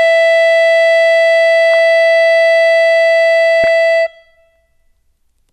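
At 1.73 s the music briefly burbles. This is DAB burbling. Weak reception lets bit errors slip past error correction into the MP2 data. Corrupted samples put short noise blips in single sub-bands, and corrupted scale factors make sub-bands jump in level for up to a frame. Here it lasts only an instant. From 3.64 to 3.68 s it returns over the programme. Both bursts suggest a few damaged frames, at error rates of around 0.15 and 0.2 percent.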